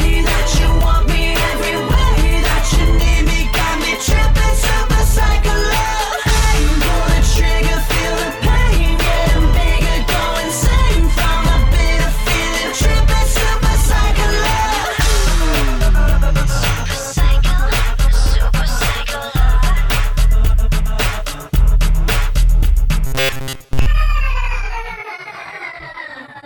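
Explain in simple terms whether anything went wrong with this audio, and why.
Near the end, from about 23.07 to 23.86 s, the sound turns into a stiff, metallic buzz around 134 Hz. That's robotic sound from repeated short buffers: audio likely arrived too slowly, so tiny chunks of about 7.5 ms were looped for most of that stretch.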